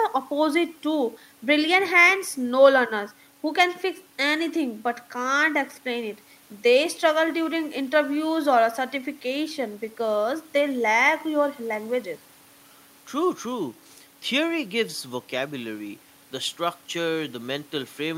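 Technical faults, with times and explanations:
Nothing technical stands out in this bit of speech; I couldn't pick out a single fault anywhere in it.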